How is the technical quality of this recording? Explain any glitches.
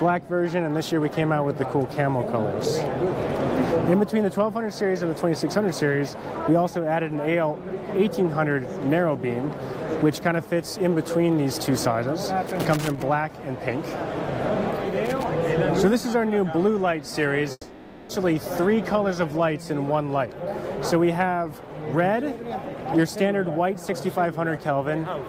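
The recording has two separate technical problems: bursts of loose connector crackle around the middle of the clip, and a gap later on that sounds like a long network dropout.

The loose connector crackle occurs from 12.47 to 13.02 s and again from 15.05 to 15.24 s. A worn or dirty contact keeps opening and closing as it shifts, so the signal is chopped on and off, and any DC offset on the line jumps with each break. The result is an irregular, scratchy crackle. On a waveform this appears as jagged spikes and brief drop-outs. A spectrogram shows scattered vertical broadband streaks.

From 17.51 to 18.11 s the audio is interrupted. For about 580 ms the last sound before the break is stretched into a fading buzzy hiss, then roughly 30 ms of near silence follows before the audio resumes, with the material from that stretch absent. This is likely a long network dropout, where the receiver concealed missing packets by extrapolating. 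A spectrogram shows smeared, decaying bands and then a blank strip.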